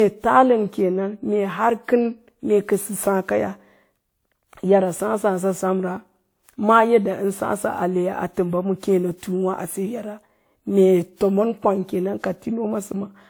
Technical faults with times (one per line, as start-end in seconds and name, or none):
0.00-13.29 generation loss